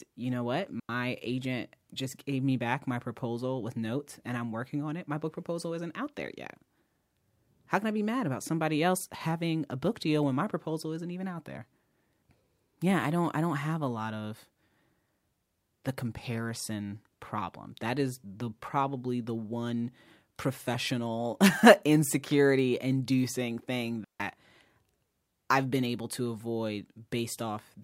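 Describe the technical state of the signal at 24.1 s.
At 24.1 s the signal is inside a digital wireless dropout running from 24.04 to 24.20 s. The receiver lost too much of the radio data stream and muted for about 154 ms, fading down and back quickly, so the speech drops into a clean gap of near silence with no noise burst on either side.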